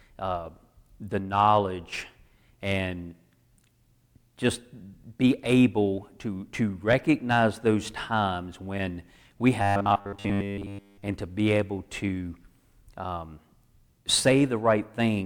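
From 9.62 to 11.03 s, after "those times when we", robotic sound from repeated short buffers takes over. A rigid 100 Hz buzz overlays the speech, which it follows only roughly. A 10 ms chunk likely repeats while most new audio is skipped.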